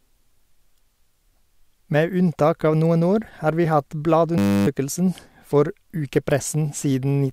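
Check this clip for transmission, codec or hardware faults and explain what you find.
One fault is present. From 4.38 to 4.67 s, just after "år har vi hatt", the speech gives way to a flat, steady 100 Hz buzz. This is a system hang loop: the system froze while the hardware replayed one 10 ms buffer, losing about a third of a second.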